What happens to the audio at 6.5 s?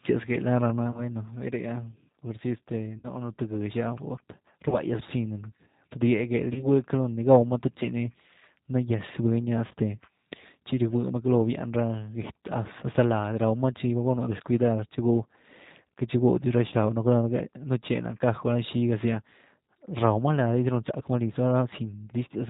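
At 6.53 s a VoIP packet went missing, and the gap of about 30 ms, which fits a single lost packet, was filled by the speech codec's concealment. The decoder kept running on its last pitch and vocal tract filter with the gain stepped down, so the sound smears into a fading buzzy tone or coloured noise. Because each frame is built from the previous one, the sound stays weakened and distorted until about 6.67 s.

This moment also sits under the G.729 codec damage that runs through the whole clip. Its sound fits an 8 kbit/s stream. The codec rebuilds each 10 ms frame from a filter, a pitch predictor and a few pulses, and it discards everything above 4 kHz. The result is a plainly audible dull, slightly rough and synthetic quality around the dropout.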